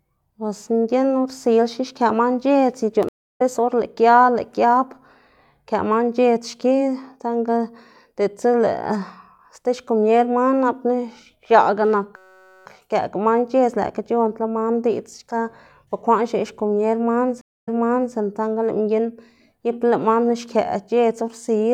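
At 3.09 to 3.42 s the speech drops out for 314 ms in a stream reconnect. The connection broke and a fresh decoder restarted mid-stream, so speech resumes roughly a third of a second further on, with that stretch skipped.

From 12.16 to 12.66 s a system hang loop sets in. The machine stalled while the audio hardware kept replaying one 5.33 ms piece of its ring buffer, which fits a 256-sample buffer, about 94 times. The result is a steady 188 Hz buzz in place of speech, with essentially no audio lost once it clears.

A second stream reconnect spans 17.41 to 18.15 s. After 258 ms of silence, playback restarts 480 ms earlier, so a short stretch of speech is heard twice.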